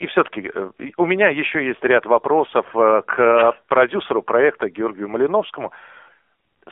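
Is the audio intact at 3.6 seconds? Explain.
No. At 3.6 seconds, as through the whole clip, the speech sounds thin, buzzy and synthetic, with nothing above about 3.5 kHz and little below 300 Hz. This is the AMR narrowband mobile codec: the audio is squeezed into a telephone band and rebuilt from a vocal-tract model excited by sparse pulses in short frame segments. The plainly audible coarseness fits a low 7.4 kbps mode.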